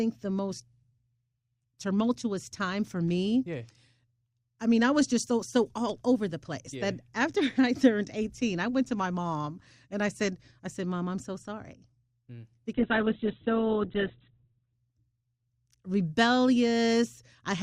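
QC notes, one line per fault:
12.73–14.73 s, adaptive stream at a lower bitrate: the speech abruptly loses everything above about 4.1 kHz and turns thin for two seconds, then snaps back, which points to a switch from a high-bitrate Opus stream to one near 8 kbit/s after the connection slowed. Unlike packet loss, there is no gap or dropout.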